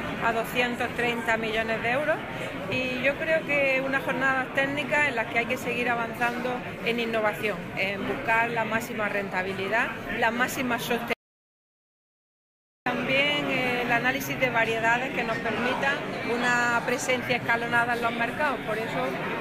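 At 11.13 s the audio input was likely lost, through a disconnected device, a failed link or a mute, while the recorder kept writing silence, producing an audio dropout to silence. The sound cuts off abruptly in mid-flow and the gap is silent, with no room tone beneath it. Roughly 1.7 s of material is simply missing before the audio returns, just as suddenly, at 12.86 s.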